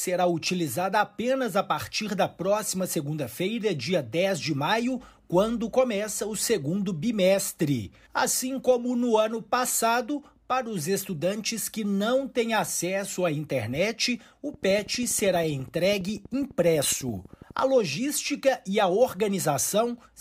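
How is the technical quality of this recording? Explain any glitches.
The recording has one clear glitch. From 14.54 to 17.60 s, a train of clicks ticks steadily at 12.1 per second. That is about forty pops, roughly as loud as the sound itself. Likely interference or a faulty connection is injecting repeated pulses.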